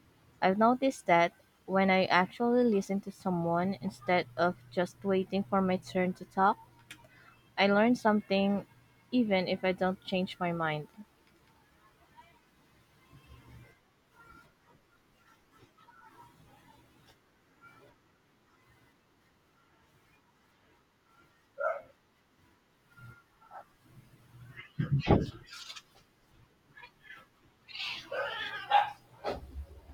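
No technical faults can be heard anywhere in this speech recording.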